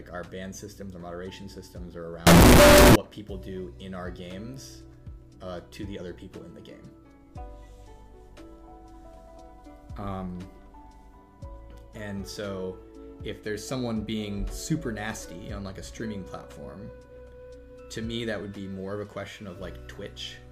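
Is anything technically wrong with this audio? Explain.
Yes, there's one problem. From 2.27 to 2.96 s the audio turns into a loud, harsh, nearly square buzz at an almost constant level, with background noise as loud as everything else. That's likely float read as integer: 32-bit float samples interpreted as 32-bit integers, so sign and exponent bits dominate.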